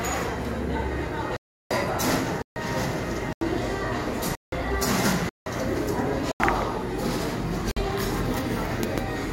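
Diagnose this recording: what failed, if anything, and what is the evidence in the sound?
Blocks of digital silence at 1.37–1.71, 2.42–2.56, 3.33–3.41, 4.35–4.52, 5.29–5.46, 6.32–6.40 and 7.71–7.77 s. This is a driver or buffer fault: output buffers went unfilled and played as zeros. Gaps of 85, 171 and 341 ms fit multiples of 4096 samples at 48 kHz.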